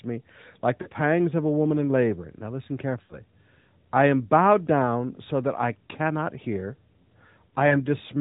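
Radio errors corrupted AMR speech frames on their way to the decoder in this speech recording, and the lost AMR speech frames were concealed by reusing the last good pitch and vocal tract settings at falling gain. Each gap comes across as a short smeared, warbling dip. The first, 0.82 to 0.88 s, falls between "me like" and "pangs of a woman" and sounds like about 40 ms of lost audio. The second, 3.04 to 3.22 s, sounds like about 60 ms lost and is drawn out and fades before the speech comes back rough for a moment. The third, 7.68 to 7.77 s, again sounds like about 40 ms. All of this sits on top of the narrowband AMR mobile codec, which cuts everything above 4 kHz and adds only light coding damage, a sound that fits the 12.2 kbps mode.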